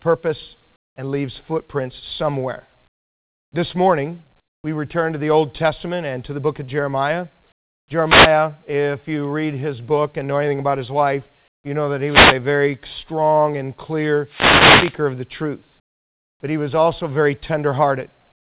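Speech clip carried over a narrowband call path, with nothing above 4 kHz, consistent with G.711 at 64 kbps. Comfort noise in place of the background appears in seven pauses: 0.76–0.96 s, 2.88–3.52 s (right after "and leaves footprints somewhere"), 4.40–4.64 s, 7.52–7.88 s, 11.48–11.64 s, 15.8–16.4 s, and 18.32 s to the end. In each, the real room tone, already about 44 dB below the loudest speech, gives way to a flat, featureless hiss roughly 18 to 26 dB quieter, producing audible dips in the background. This is likely discontinuous transmission, where the sender stops during silence and the receiver synthesises shaped noise until speech resumes. Three wireless microphone noise hits also occur: 8.01–8.39 s, just before "if you read his"; 12.05–12.38 s, between "life you know that" and "very strong and"; and 14.25–15.00 s. Each is a short swish of static as the FM radio link fades, receiver noise rising before the signal recovers.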